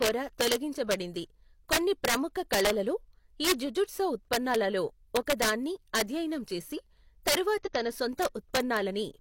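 Speech, with integer overflow running through the whole clip. The signal is pushed about 10 dB past the top of the integer range. Nothing limits it at that point. Each peak that crosses the limit wraps around to the opposite sign and jumps across the full scale. Only a small fraction of samples, under one percent, go over. They still give harsh, violent cracks on the loudest syllables, far sharper than ordinary clipping. There is also damaged data in a compressed stream from 7.62 to 7.68 s. For about 64 ms, part of the encoded stream is wrong. The decoder misreads those frames and loses sync while it hunts for the next valid frame header. The result is a brief disturbance in place of clean decoded audio.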